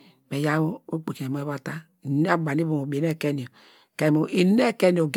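Speech, and the whole thing has that swirly, hollow smear of generation loss, with consonant attacks blurred. It's likely from about four rounds of MP3 re-encoding at around 130 kbit/s, while the top end still reaches about 20.1 kHz.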